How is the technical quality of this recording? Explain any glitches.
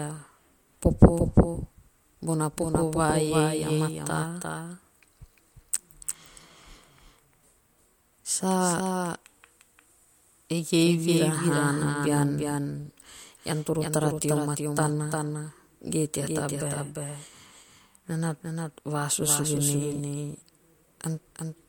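The recording is compromised by a doubled audio track running throughout. A second full-band copy of the speech trails roughly 0.4 s behind, some 5 dB quieter, likely from a slower capture path or misaligned edit. Unlike echo or reverb, it repeats once with no decay or room colour.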